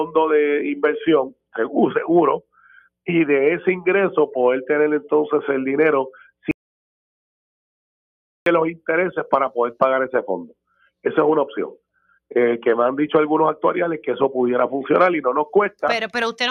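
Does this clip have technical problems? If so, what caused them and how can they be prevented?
Yes. Audio dropout to silence from 6.51 to 8.46 s: about 1.95 s of silence with no room tone, likely from the input dropping while recording continued. Prevent it by securing cables and connections and watching input meters during capture.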